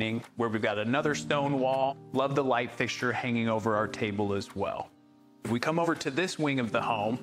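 At 1.88 s the sound lurches forward, losing roughly a fifth of a second. At 5.83 s a smaller jump drops about one frame's worth. Both are compressed frames skipped: the decoder never played whole frames, either missing or rejected as damaged. The jumps fit a frame length near 46.4 ms.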